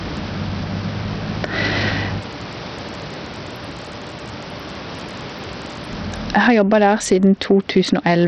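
Gain pumping runs through the whole speech recording: a level swing of roughly 20 dB, most likely from gain set far too high with a fast limiter or compressor clamping down, leaving the dynamics squashed. The room noise sits about 39 dB below the speech. Bluetooth SBC compression is also present throughout: nothing survives above 11.4 kHz, the remaining treble flickers, and gritty quantisation noise with aliasing rides on the speech. This heavy damage likely comes from a starved bit pool, consistent with a low bitrate around 64 kbps, leaving the upper sub-bands with few bits.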